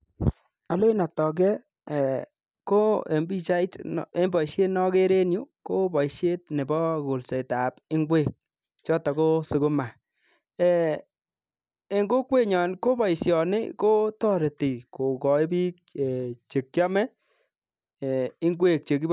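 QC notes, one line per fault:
No faults found in the speech. Nothing needs noting.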